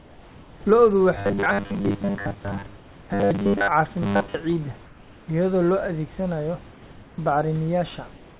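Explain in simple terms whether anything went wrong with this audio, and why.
Comfort noise in place of the background appears from 0.0 to 0.66 s, 2.76 to 3.1 s and 4.86 to 5.28 s. In those gaps the real room sound gives way to a flat, featureless hiss, slightly quieter, likely because the sender paused transmission while nobody was talking.

Robotic sound from repeated short buffers runs from 1.18 to 3.68 s and again from 4.02 to 4.35 s. The speech turns into a metallic 100 Hz buzz, which fits the last 10 ms of audio being replayed over and over. This likely happens when new audio arrives too late and most of the real signal is skipped.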